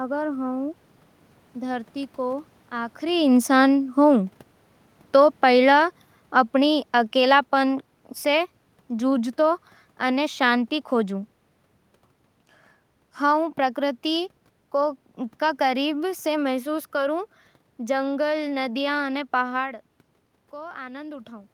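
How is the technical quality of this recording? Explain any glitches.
One glitch stands out, a gradual drop in level partway through the speech.

Automatic gain falling, from 6.54 to 11.2 s: the automatic gain control found the input too loud or its background noise too strong and eased its gain down over those few seconds, by about 4 dB in total. The speech starts that stretch at full level and then sinks steadily, with the room noise behind it sinking by the same amount. That shared fall sets it apart from the level shifts around 3 s and 19.5 s, where the talker moved relative to the microphone.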